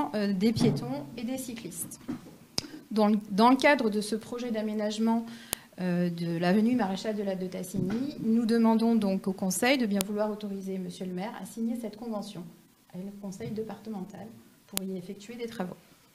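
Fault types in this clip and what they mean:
File header played as audio: sharp, loud clicks at 5.53 s, 10.01 s and 14.77 s, each about a millisecond long. Separate WAV pieces were joined without stripping their headers, so the header bytes play back as samples, snapping in regardless of the surrounding signal.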